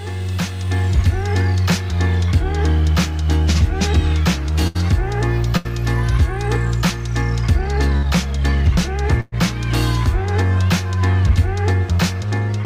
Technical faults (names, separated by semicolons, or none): burst of packet loss